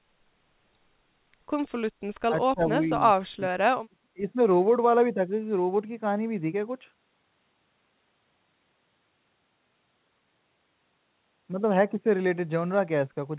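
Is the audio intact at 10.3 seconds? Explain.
Yes, the speech at 10.3 seconds is intact, carried through the call path with its narrow telephone bandwidth, with nothing above 4 kHz, as expected for a G.711 codec.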